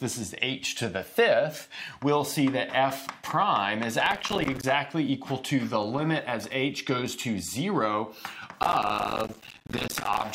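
A gritty burst of crackle tears through the sound from 4.06 to 4.64 s, and a longer one from 8.63 to 10.25 s. This is processor overload crackle: many tiny silent gaps in quick succession, which fits missed deadlines on buffers of around 5 ms.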